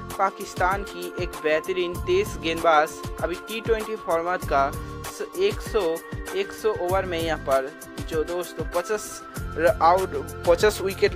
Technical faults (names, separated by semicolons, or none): none